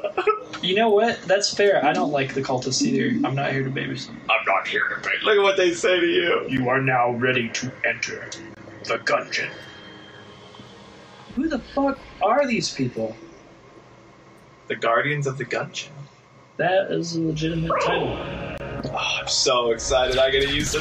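The playback or processing chain three times likely failed to fill its output buffer, leaving a block of digital silence each time: at 6.57 s, a gap of about 12 ms, which fits a 512-sample buffer, then from 8.55 to 8.57 s and from 18.58 to 18.60 s, each about 23 ms, which fits a 1024-sample buffer. The audio drops out and returns with no fade, so the shorter gap is heard as a sharp tick and the longer two as brief gaps.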